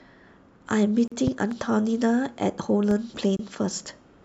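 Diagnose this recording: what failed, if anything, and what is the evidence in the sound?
A gap at a join of encoded pieces, from the codec stage. Silence opens for 39 ms at 1.08 s and for 27 ms at 3.37 s. The edges are smeared by the codec. Speech resumes where it stopped. Each piece kept its encoder start delay and final-frame padding.

Loud pops, likely from the analogue wiring, such as a plug, switch or static discharge. Two sharp pops fall between 1.27 and 1.54 s, peaking about 10 dB above the speech. A weaker one, about 5 dB above, lands at 2.91 to 2.94 s. Speech continues underneath.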